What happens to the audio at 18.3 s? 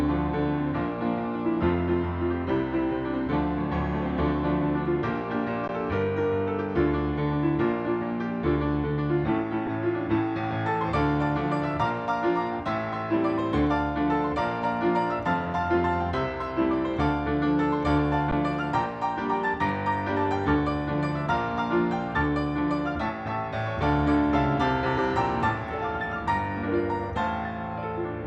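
At 18.31 s there's an underrun with held sample: the output buffer runs dry for about 10.7 ms, a gap of 512 samples, and the converter just sits on its last value until data arrives again. The waveform goes flat, so the sound simply stops with barely a click. Nothing seems to be lost in the meantime, so playback picks up where it left off and the restart is fairly soft.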